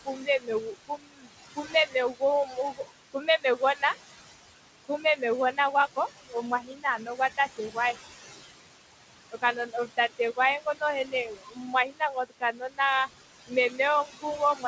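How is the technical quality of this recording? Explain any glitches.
Technical quality is held back by the noise suppressor, which both colours the background and clips parts of the speech. The room noise sits about 10 dB below the speech, and nothing reaches above 8 kHz, which fits a G.722 call path at about 64 kbps.

Noise suppressor artifacts run through the whole clip. The suppressor pulls steady background down by about 17 dB frame by frame, so the leftover noise pumps between phrases. Unlike plain room noise, it changes level with the speech.

Speech cut by the noise suppressor occurs from 0.05 to 3.96 s, 4.88 to 5.58 s, 5.96 to 7.97 s, 9.32 to 13.09 s, and 13.47 s to the end. Speech mistaken for noise is lowered by about 14 to 22 dB. This leaves soft consonants and word endings swallowed for roughly one and a half seconds in the first stretch and about a second in the fourth. These parts sound swallowed or faint.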